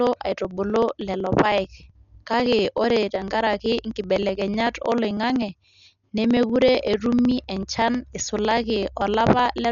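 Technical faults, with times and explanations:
Throughout, Dolby Digital compression, likely: speech sounds dull with nothing above 7 kHz, and heavy coding damage at a low bitrate, around 48 kbps, adds rough, fluttering noise.
0.07 to 9.65 s, periodic USB or driver dropouts: roughly a millisecond of audio is skipped every 0.063 s, giving a steady train of ticks under the speech.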